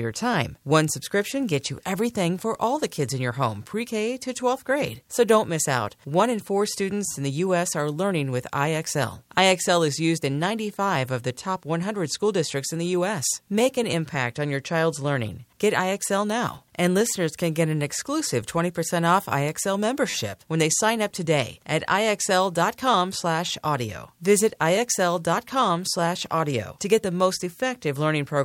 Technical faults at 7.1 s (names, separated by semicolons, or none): repeated buffer